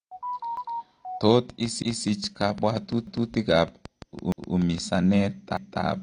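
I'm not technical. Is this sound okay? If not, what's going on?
No, there are three problems.

AAC compression, throughout the whole clip: the speech was likely squeezed into a small file by a format that throws away detail it judges you won't miss. Here too much was removed. Everything above about 9.9 kHz is gone, leaving the speech audibly dull and smeared.

Overlapping chunks, at 0.57, 1.82, 3.07, 4.32 and 5.57 s: the audio was handled in one-second pieces, and each new piece began a quarter of a second before the previous one finished. So a quarter-second snippet plays twice at each join, heard as a stutter.

Train of clicks, from 1.5 to 5.0 s: a steady ticking of around fifteen similar clicks, about six every second, sits on top of the speech and in pauses. Something is likely injecting these pulses, such as interference from nearby equipment or a faulty connection or power supply.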